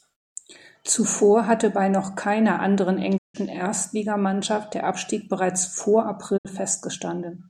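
At 3.16 s, right after "bei noch keiner anderen", the speech fades out over about 20 ms and drops to silence until 3.36 s. A shorter hole follows at 6.36 s, after "bereits vor", lasting until 6.47 s. Both are a digital broadcast dropout: the receiver stopped getting valid frames and muted, losing roughly 160 ms and 64 ms of programme. The longer gap covers five lost frames, and the shorter one two.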